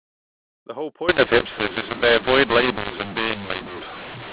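From 1.09 s to the end, the speech turns harsh and distorted. This is mu-law and A-law mixed up: mu-law telephone samples are decoded as A-law. Levels get scrambled, some too loud, some too soft. Quiet samples rise above silence, so pauses fill with noise.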